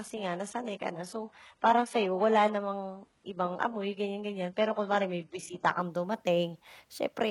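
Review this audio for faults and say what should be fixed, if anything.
Adaptive stream starting at a low bitrate, from 0.00 to 5.81 s. The player opened the speech on a low-bitrate version so it could start quickly, then switched up once it had gauged the connection. Until 5.81 s nothing is present above 11.5 kHz, the treble sounds thin and synthetic, and codec artefacts are stronger, which fits 12 kbit/s HE-AAC. Quality then jumps without a gap, consistent with 96 kbit/s AAC-LC. To prevent this, start playback on a higher initial rendition or measure bandwidth before playback begins.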